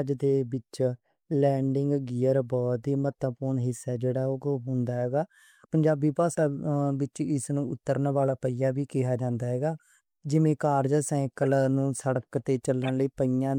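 Damaged compressed frames reached the decoder and were played anyway: corrupt frame decoded, three times, each spanning a few frames. With flipped bits, misread gains and codes push energy to the wrong frequencies. At 3.12 s this is a barely audible tick, very low in level. From 11.43 to 11.45 s a much louder blip cuts into the speech, and from 12.84 to 12.90 s a similarly strong chirp-like burst follows.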